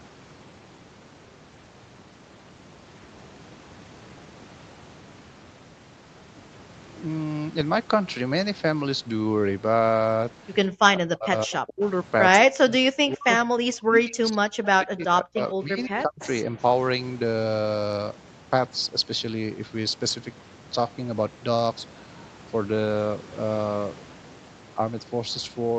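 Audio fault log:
10.72–11.81 s, 12.39–15.02 s and 15.21–16.21 s: speech suppressed in double talk. The talker's level plunges by around 40 dB in places and parts of the speech drop out in pieces. The gaps add up to roughly three and a half seconds. This is likely the echo canceller reacting to both sides talking at once. It cannot tell the near talker from loudspeaker echo, so it turns everything down.
16.20–16.27 s: echo leak. A faint copy of the speech returns about 150 ms late, around 25 dB below the main voice. It lasts only a brief scrap at the end of the last suppressed stretch. The likely cause is a far end playing the call on a loudspeaker whose echo canceller failed to remove all of what its microphone picked up. The leftover was sent back down the line as a short delayed echo.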